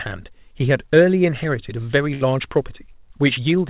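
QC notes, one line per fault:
2.14–2.23 s, burst of packet loss: a run of consecutive packets went missing or arrived too late to play. The receiver covers the gap by extending the last sound it had, fading it for about 66 ms, so the last sound is briefly held and dims away. Playback then resumes about 60 ms further on, leaving that stretch absent. Throughout, nothing is heard above 4 kHz, which fits a G.711 A-law call path at 64 kbps.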